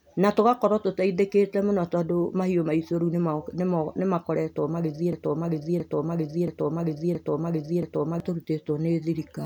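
From 5.13 s to 8.20 s the speech falls into a broken-record loop: a 0.67 s fragment plays five times back to back, each pass identical, and the speech that belonged in those three seconds never arrives. The likely cause is a player or stream that stalled and kept resending the last piece it held. Unlike an echo or a brief stutter, nothing fades or varies between passes. The same long chunk simply repeats exactly.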